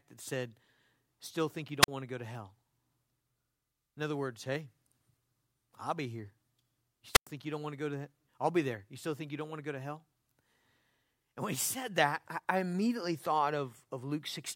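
Speech with two wireless microphone squelch dropouts, at 1.82–1.88 s (about 42 ms muted) and 7.13–7.27 s (about 103 ms). A brief hiss or static rise before each silent hole distinguishes them from a plain digital gap.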